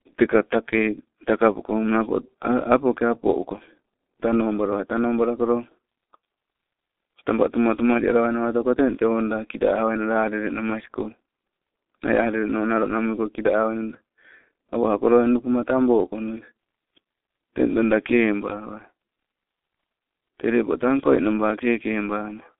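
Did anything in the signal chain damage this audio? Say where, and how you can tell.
Yes, at the codec stage: G.723.1 coding throughout leaves muffled, hoarse speech with smeared consonants and nothing above 3.6 kHz. That roughness, beyond plain 250 Hz–3.5 kHz telephone band-limiting, fits its coarse 6.3 kbit/s, 30 ms frames.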